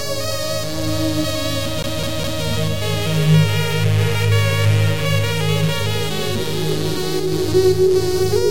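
Right around 1.82 s the music catches on itself: it's the CD stuck on one turn. A scratch is kicking the laser back a track at the same point each rotation, so a chunk of roughly 205 ms plays three times over, with a tiny mute at every jump, until things move on at about 2.44 s. You get that quick, evenly spaced stutter everyone knows from a skipping disc.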